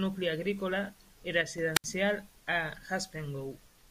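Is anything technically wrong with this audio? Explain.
Yes, there are two faults in this speech clip, both just after "nucli agrícola i".

From 1.41 to 1.58 s the level drops abruptly by about 6 dB and then recovers. This is likely one channel drops out: when one stereo channel is lost and the rest is summed to mono, the shared content halves. The sound gets quieter but never goes silent, and no hiss precedes the drop.

From 1.74 to 1.86 s there is a wireless microphone squelch dropout. The radio signal fades, hiss rises briefly, and the receiver's squelch mutes the output for about 71 ms before the speech returns. This is a true hole of near silence, not a level step.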